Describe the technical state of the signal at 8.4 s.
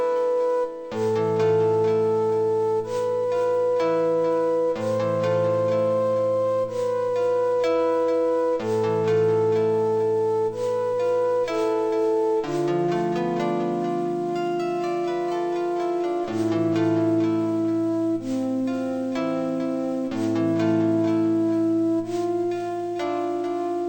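At 8.4 s you're hearing the stereo read as mono fault that runs the whole clip: interleaved left-right samples played as one channel, so it's half speed, an octave down, with a faint mirrored image up high.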